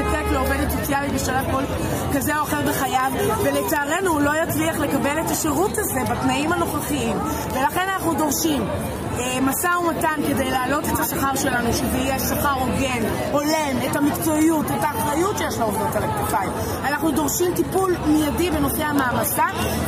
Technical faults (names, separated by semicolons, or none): word clock ticks